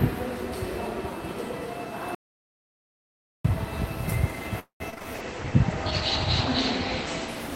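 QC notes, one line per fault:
2.15–3.45 s, audio dropout to silence: The sound stops abruptly and returns just as abruptly about 1.3 s later. The gap is silent, with no background or room tone underneath. This points to the input being lost, likely a disconnected device, a failed link or a stray mute, while the recorder kept writing silence. Whatever happened during those 1.3 s is simply gone, not hidden or delayed.
4.59–4.82 s, call audio freeze: The last sound is stretched into a short fading buzz or hiss, then drops to silence for about 120 ms before the audio resumes. The cause is likely late packets leaving the receiver's jitter buffer empty, so it extended what it last had. The audio picks up where it stopped, so nothing is lost. Instead about 208 ms of extra delay has been inserted at this point.
4.90–5.06 s, repeated packet loss (robotic sound): In this short stretch the audio breaks up four times in quick succession, which gives it a choppy texture. 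Each hole is patched by extending the preceding sound, the longest about 23 ms. Roughly half of the span is filled-in material rather than real audio, and about 80 ms of the original sound is missing outright.
5.16 s to the end, call bitrate drop: From here the audio turns coarse and muffled. The top end is cut off at about 8 kHz, where it reached 20 kHz before. The grainy, watery texture fits the encoder being pushed from around 64 kbps down to around 12 kbps as the bandwidth estimate fell. It stays at its worst for about 1.7 s and has not recovered by the end of the clip.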